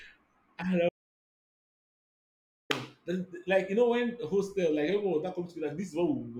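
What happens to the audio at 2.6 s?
At 2.6 s the clip is still inside an audio dropout to silence that runs from 0.89 s to 2.70 s, roughly 1.8 s in all. The speech stops abruptly mid-flow and the gap is dead silence, with no room tone or background beneath it, until the sound returns just after 2.7 s. That pattern points to the input likely being lost for a moment while recording continued, writing silence in place of the missing audio, so whatever was spoken during the gap is gone.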